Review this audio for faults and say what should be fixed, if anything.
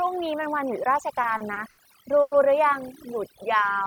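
Throughout the clip, the speech sits over a near-silent background with twinkling specks. This is overdone noise removal: reduction set too strong cut frequency bands near its noise estimate, and quiet speech detail went with them. Fix it by lowering the reduction strength or applying it to a cleaner recording.

From 1.21 to 1.80 s the speech drags and stutters through four brief holds, the longest 70 ms. These are repeated stalls (stutter): the jitter buffer kept running empty, and the receiver stretched the last sound, about 140 ms in total, or roughly a quarter of that span, without losing any audio. Fix it with a larger or adaptive jitter buffer and a steadier network path.

From 2.22 to 2.34 s the last sound is held and continued for about 100 ms, pushing everything after it 100 ms later without losing audio. This call audio freeze is likely from packets held up in transit, emptying the jitter buffer. 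Fix it by reducing network delay spikes and giving the buffer more headroom.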